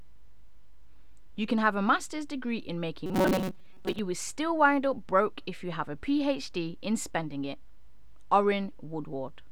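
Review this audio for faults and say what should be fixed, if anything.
From 3.06 to 3.99 s, robotic sound from repeated short buffers: a rigid 188 Hz buzz, likely from about half the audio being replaced by repeats of a 5.3 ms chunk. Keep the input buffer filled so no chunk is ever repeated.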